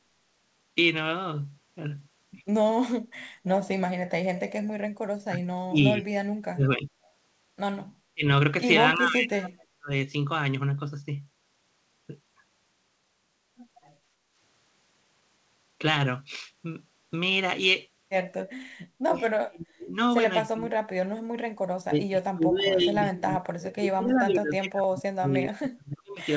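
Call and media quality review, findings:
Speech suppressed in double talk at 5.22–6.92 s, 8.14–8.24 s, 8.96–9.90 s, 19.07–19.95 s, and 20.5 s to the end. Near-end level dips by up to about 40 dB, likely from echo canceller suppression while both sides talk. The talker drops out rather than the room.

Echo leak at 7.05–7.10 s. A faint copy of earlier speech returns about 320 ms late, about 40 dB below speech, likely from residual loudspeaker echo passing the canceller. Added sound, not a dip.

Background gated by the echo canceller at 14.16–14.35 s. Room tone ducks by about 8 dB for roughly 200 ms during far-end playback.

The G.722 call path cuts off everything above 8 kHz.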